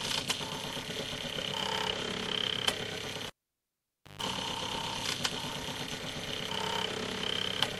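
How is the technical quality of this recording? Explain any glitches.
A single glitch affects the recording, between 3.27 and 4.22 s. A cable pulled and plugged in causes a pop, about 0.9 s of near silence, a 139 ms burst of 50 Hz mains buzz and a second pop as the sound returns. The live connector broke contact, and while only its tip touched, the unshielded conductor picked up mains hum before the plug fully seated.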